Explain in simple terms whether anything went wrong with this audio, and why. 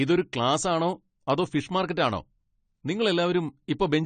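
The speech sounds dull and smeared from start to finish, with nothing above about 9 kHz and a fizzy, warbling edge on hissy sounds. That points to AAC compression, likely at a low quality setting that discards detail to save space.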